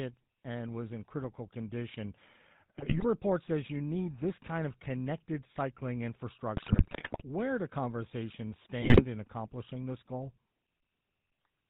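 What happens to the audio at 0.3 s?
At 0.3 s the speech is already passing through a GSM full-rate codec. It runs through the whole clip. It rebuilds the voice as a vocal-tract filter fed by sparse, regularly spaced pulses, which fits a 13 kbps stream. Nothing above 4 kHz survives. The result is a plainly audible buzzy, gravelly roughness.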